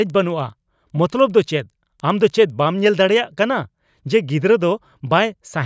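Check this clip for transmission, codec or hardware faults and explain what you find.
One fault is present: a resampler restarted on every block, from 0.0 to 3.0 s. Each 100 ms block was converted alone, so its edges lacked true neighbouring samples. That leaves ticks at 10 Hz over the speech, in a 24 kHz to 16 kHz conversion.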